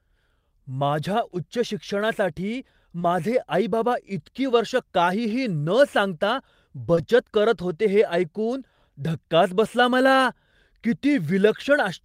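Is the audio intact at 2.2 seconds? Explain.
Yes, at 2.2 seconds the speech plays through intact, with no fault to be heard at that moment.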